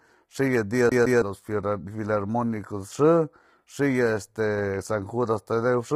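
Low-delay AAC compression runs through the whole speech clip: the voice sounds rough and grainy, with noise filling the gaps between harmonics and a thin, synthetic top band. This is likely AAC-ELD, whose short frames blur pitch detail, and the heavy damage points to a bitrate near 24 kbps.

CD stuck on one turn occurs from 0.89 to 1.22 s: a 162 ms slice of audio repeats twice, with a brief mute at each jump. The laser is being thrown back one track at the same spot on each rotation, producing the quick, even stutter of a skipping disc.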